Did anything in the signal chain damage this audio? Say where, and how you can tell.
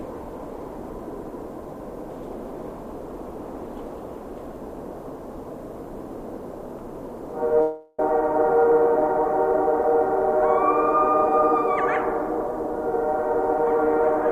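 Yes, both at the network stage. From 7.61 to 8.01 s the sound gives way to a fading buzz lasting about 0.38 s, then resumes with roughly 0.3 s gone, not merely delayed. This is likely a long network dropout. A short loss would conceal in milliseconds without skipping ahead.

From 8.58 to 9.2 s the sound runs at about 105% speed with unchanged pitch, shedding a few tens of milliseconds. This is a jitter buffer speed-up: the receiver trims repeated pitch-period slices to drain excess delay. A resampling error would shift pitch along with tempo.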